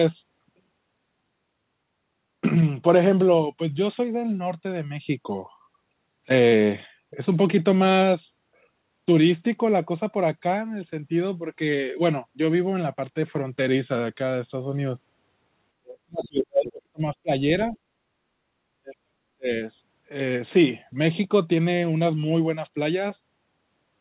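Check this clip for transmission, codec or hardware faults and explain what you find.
Two faults are audible, both tied to echo cancellation during overlapping talk. The band stops at 4 kHz, which fits narrowband G.711 mu-law telephone coding.

Speech suppressed in double talk: the speech drops from 15.8 to 17.02 s, from 17.22 to 17.3 s, from 17.72 to 17.77 s and from 18.83 to 19.5 s. The longest dips fall by roughly 40 dB, and the 17.72 s one by only a few dB. The likely cause is an echo canceller that couldn't tell the near talker from loudspeaker echo and attenuated everything.

Other side's voice leaking through: from 17.73 to 17.78 s, a faint scrap of a second voice appears, roughly 35 dB below the speech. This likely comes from residual loudspeaker echo that the canceller left in the microphone signal. It lasts only about 50 ms, so it registers as a brief blip, and it coincides with the shallow suppression dip at the same moment.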